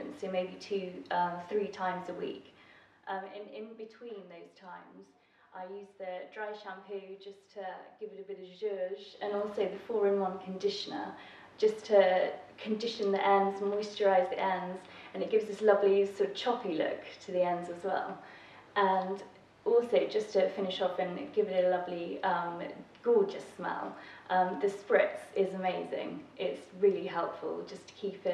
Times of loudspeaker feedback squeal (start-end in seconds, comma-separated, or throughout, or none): none